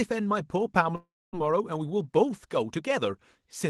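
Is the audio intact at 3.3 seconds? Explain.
Yes, the speech at 3.3 seconds is intact, with nothing there beyond the ordinary character of the call path it was carried over.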